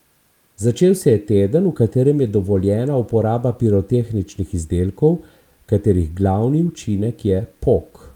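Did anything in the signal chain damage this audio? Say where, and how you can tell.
No, nothing in the signal chain damaged this audio.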